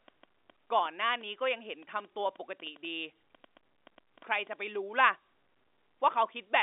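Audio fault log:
0.08–4.76 s, train of clicks: about twenty similar pulses at roughly 4.7 per second, unevenly spaced, reaching about the level of the speech itself, ticking over the telephone-band speech and in its pauses, likely interference from nearby equipment or a faulty connection or power supply.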